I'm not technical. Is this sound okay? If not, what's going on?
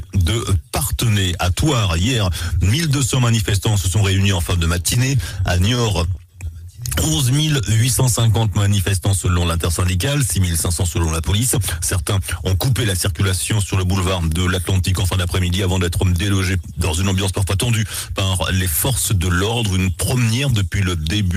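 No, there are a few spots where the timing goes wobbly, all of them signs of a connection that delivered the sound unevenly.

From about 4.82 to 6.56 s you'll hear repeated stalls (stutter). The sound kept arriving late, so the player ran dry 21 times in quick succession. Each time it stretched the last bit of sound to cover the pause, never longer than about 16 ms. Nothing actually goes missing, but roughly a quarter of a second gets padded in, so it drags and catches.

Right after, from 7.30 to 8.70 s, there's a jitter buffer slow-down. The player was low on reserve, so it quietly repeated tiny slivers of sound to buy time, adding about 0.14 s. That section plays at around 90% speed. The pitch stays the same, but things sound slightly drawn out, maybe with a faint warble.

Then the opposite happens twice, a jitter buffer speed-up. A backlog built up, so the player trimmed tiny pieces to catch up. 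From 10.66 to 12.21 s it cuts roughly 0.15 s and runs at about 108% speed, and from 17.10 to 17.54 s it trims a few hundredths of a second at about 107%. Pitch is unchanged, but those stretches feel a bit hurried.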